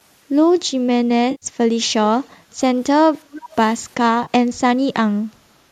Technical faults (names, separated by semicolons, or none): AAC frame loss with concealment; echo leak